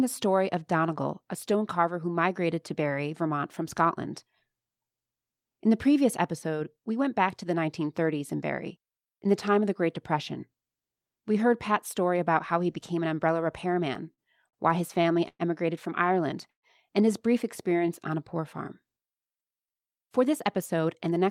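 From 13.75 to 14.56 s the speech stutters and drags through five brief holds, the longest 45 ms: repeated stalls (stutter), as late packets repeatedly emptied the jitter buffer.

At 15.01 s a sound is held about 30 ms too long, a short stall from a late packet that left the buffer empty until it arrived.

Two call audio freezes follow. From 15.28 to 15.42 s the sound hangs for 112 ms and fades, including 50 ms of silence. From 16.50 to 16.66 s it hangs for 129 ms, 120 ms of it silent. Both were likely caused by packets held up in transit, after which playback resumes where it stopped.

From 17.70 to 17.88 s the speech slows to 85% speed at unchanged pitch, gaining 35 ms. This is a jitter buffer slow-down, repeating pitch periods to rebuild its reserve.

From 19.85 to 21.28 s the speech runs about 8% fast and sounds hurried, with roughly a tenth of a second trimmed. This is a jitter buffer speed-up, cutting short pieces to shed excess delay.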